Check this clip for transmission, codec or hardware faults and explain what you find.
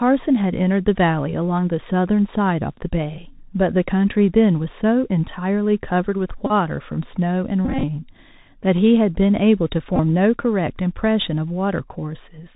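Two faults are present, one throughout and one in three bursts.

The whole clip carries Bluetooth CVSD headset codec damage. Its one-bit, 64 kHz up-down coding removes everything above 4 kHz. S sounds turn scratchy over a granular hiss.

Bluetooth headset packet repeats occur at 6.46–6.52 s, 7.65–7.84 s and 9.96–10.00 s. Lost packets were replaced by replaying the previous one. Runs up to about 20 ms buzz near 267 Hz. The 7.65 s burst is longest, with 120 ms lost.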